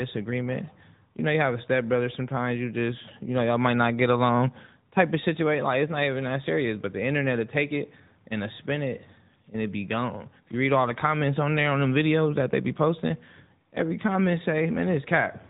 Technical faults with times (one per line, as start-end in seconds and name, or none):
0.00-15.50 AMR narrowband mobile codec